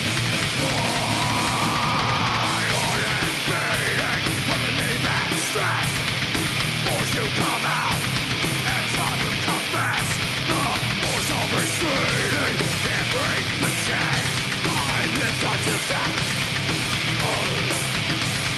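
No faults are audible at any point; the audio has come over a call path whose top end rolls off near 12 kHz, consistent with Opus running at something like 64 kbps.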